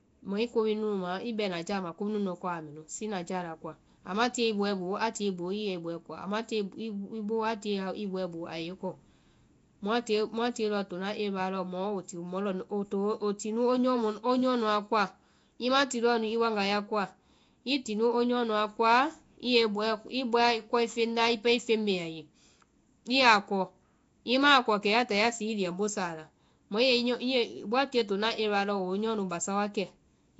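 Nellymoser compression is the likely cause of damage running through the whole speech clip: a rough, hissy halo, a smeared underwater quality, and nothing above 7.7 kHz. Short blocks coded at about two bits per sample, fitting 32 kbps, leave weak bands filled with noise.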